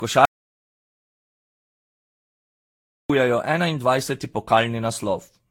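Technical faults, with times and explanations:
Throughout: generation loss. The speech sounds swirly, smeared and hollow, with blurred attacks and nothing above 19.5 kHz. This is more damage than a single low-bitrate pass would leave. The likely cause is the audio being decoded and re-encoded several times, roughly seven. That fits a chain of Vorbis passes at around 33 to 36 kbit/s. Each pass quantises again on a shifted frame grid. Noise and spectral holes pile up with every generation.
0.25 to 3.10 s: audio dropout to silence. The speech cuts off abruptly and returns mid-flow. About 2.84 s in between is lost. The gap is silence with no room tone at all, so it is not a quiet pause in the talking. The likely cause is the input being lost, through a disconnected device, a failed link or a stray mute, while the recorder kept writing silence.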